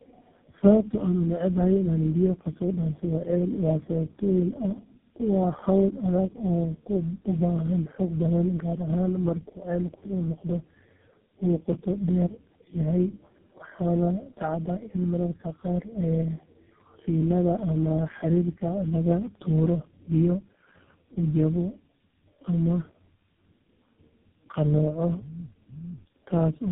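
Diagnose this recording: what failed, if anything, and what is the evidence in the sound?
Tandem speech coding at the codec stage, throughout. The speech sounds rough, muffled and warbly, with nothing above 3.8 kHz. This points to three low-rate speech codecs in series, such as AMR-NB and GSM full rate. Each one re-coded the previous one's degraded output.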